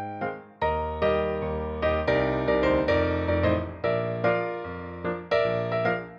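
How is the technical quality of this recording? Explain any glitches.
No glitches or technical faults can be heard here.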